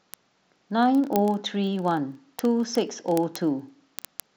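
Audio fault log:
0.11 to 4.35 s: word clock ticks, sharp uneven clicks repeating roughly every 30 ms as unlocked clocks slip about 700 ppm, dropping or repeating one sample each time, unlike random dropouts.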